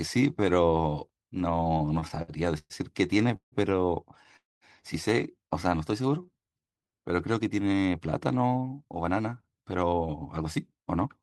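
Repeated stalls (stutter) run from 1.63 to 2.73 s. Packets kept arriving late, so the jitter buffer emptied eight separate times, and each time the receiver stretched the last sound to bridge the wait. About 286 ms of filler went in, roughly a quarter of that stretch, with the longest hold at 119 ms. Nothing is lost, but the speech lurches and drags in small hitches.

Call audio freezes follow at 3.36 to 3.55 s and 4.37 to 4.64 s. In each, the speech stops and the last sound lingers briefly before dropping into silence, about 90 ms the first time and 190 ms the second. The likely cause is packets held up in transit, leaving the buffer dry until they arrived. Playback then resumed where it had halted, pushing everything later by 160 ms and then 248 ms.

Jitter buffer slow-down spans 5.77 to 6.96 s. With its reserve running low or its target delay just raised, the receiver repeated single pitch periods over and over to add 146 ms of audio, playing the speech at 88% speed. 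The pitch stays put while syllables stretch out, giving a slightly sluggish, drawn feel.

Jitter buffer speed-up covers 8.61 to 11.07 s. Holding more audio than it wanted, the receiver trimmed short pitch-period slices repeatedly, removing roughly a third of a second and running the speech at 111% speed. The pitch is unchanged, but the delivery sounds noticeably hurried.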